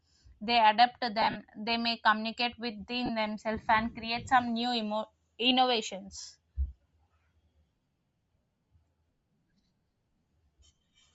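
Throughout the speech the upper spectrum sounds thin and grainy, with a breathy, hissy edge where high detail has been swapped for shaped noise. The damage is plainly audible. This is likely Bluetooth LC3 compression, and the texture fits a low rate near 32 kbps with 10 ms frames. What sets it apart from MP3-style artefacts is the noise-filled top rather than warbling, swirling pre-echo.

From 1.22 to 1.37 s, just after "they adapt to", lost LE Audio frames break up the sound. About 100 ms is missing, scattered over 140 ms, with the longest gap roughly 50 ms. The decoder repeats the last spectrum with scrambled phase, so the voice smears into a noisy smear rather than cutting to silence. A second, shorter loss of 30 ms comes at 3.06 to 3.10 s, before "themselves and create some", and has the same smeared quality.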